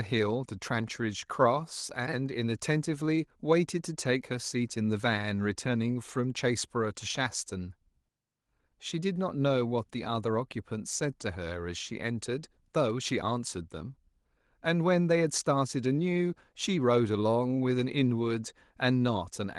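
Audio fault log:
No fault to log in this audio.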